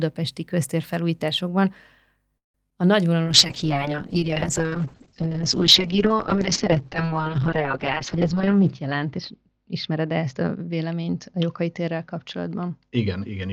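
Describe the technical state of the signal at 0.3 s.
At 0.3 s the speech signal is intact, with no audible fault at that moment.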